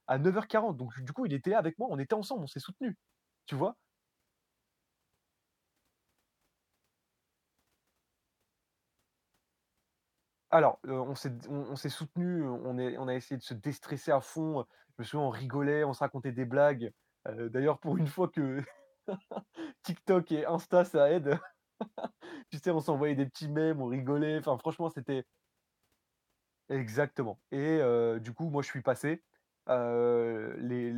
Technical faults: none

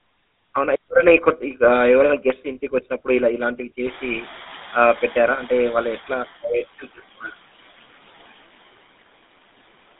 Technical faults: noise suppressor artifacts; GSM full-rate codec

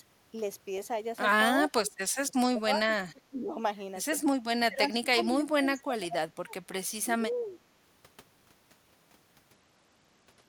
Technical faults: speech suppressed in double talk; Bluetooth SBC bit pool drop

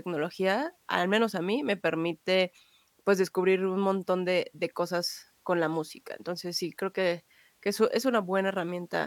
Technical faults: none

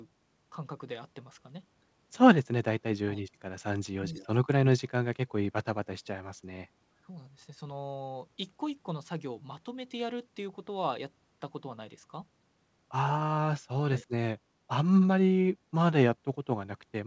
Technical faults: speech suppressed in double talk; echo leak

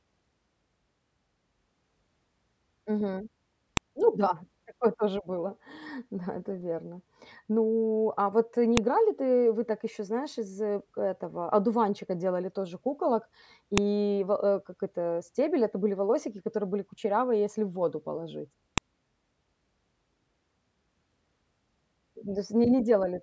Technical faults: file header played as audio

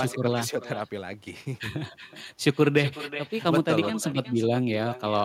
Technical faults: echo with no canceller

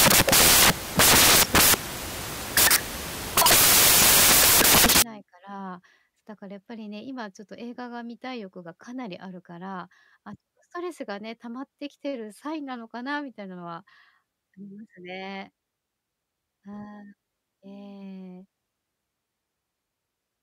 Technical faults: samples built from the wrong bytes

